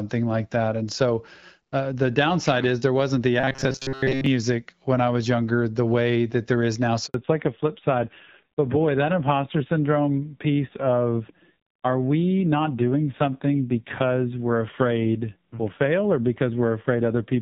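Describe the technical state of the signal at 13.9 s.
Fallback to narrowband is in effect at 13.9 s, spanning 7.14 s to the end of the clip. The call has dropped from HD Voice to a narrowband codec, so nothing above 4 kHz remains, and the speech sounds duller and rougher, consistent with a low-rate AMR-NB mode.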